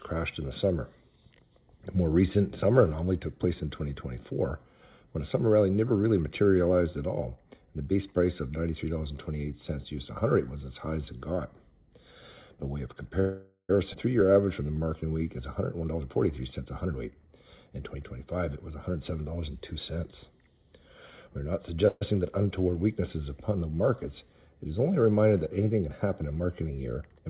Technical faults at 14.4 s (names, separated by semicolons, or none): jitter buffer slow-down